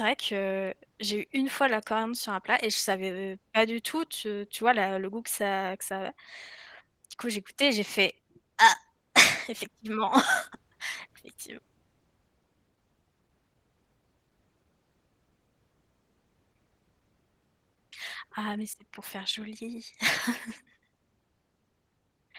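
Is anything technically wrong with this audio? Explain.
Yes, Opus voice compression runs through the entire speech clip, and the damage is plainly audible. The voice comes across hoarse and a little robotic, which fits a low bitrate around 16 kbps. At that rate the linear-prediction coder handles the lower band and codes the excitation coarsely, while a thin layer above 8 kHz carries the top end.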